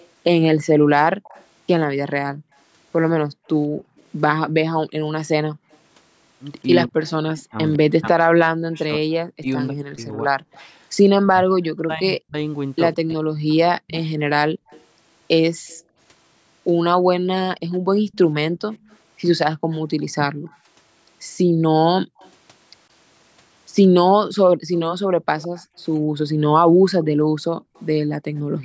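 From the start to 10.64 s, a faint repeat of the speech trails the voice by 154 ms, far quieter than the direct voice. This is echo leak, likely from a far-end loudspeaker whose echo canceller let part of the microphone pickup return down the line. Unlike a room reflection, the copy arrives after a fixed, distinctly audible gap and sounds detached from the talker's own acoustics rather than blended into them.

Between 0.78 and 5.71 s the room sound behind the voice sinks, by about 40 dB at its deepest and for roughly a second in all, then springs back. This is background gated by the echo canceller: while the loudspeaker played, the canceller clamped the microphone down. Only the ambience vanishes, briefly, and the steady noise floor returns at once when the canceller releases.

From 6.87 to 14.17 s the talker's own voice dips and breaks up, losing level sharply, with the deepest drops near total, for around four seconds in all. 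This is speech suppressed in double talk, likely because both sides spoke together and the canceller, unable to tell its talker from the echo, turned everything down. The dropouts hit the speech itself, not the room tone, and track the overlap.

The echo leak returns from 13.97 to 28.4 s, now trailing by 159 ms at a similar low level. Overlapping it, from 14.53 s to the end, the background is gated again, dropping by up to about 40 dB across roughly three seconds in total. Throughout, the band stops at 8 kHz, as the call microphone path shapes it.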